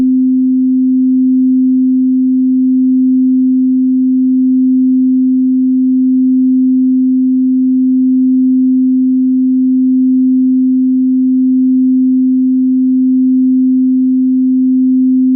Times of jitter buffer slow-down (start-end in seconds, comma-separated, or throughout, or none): 8.92-9.36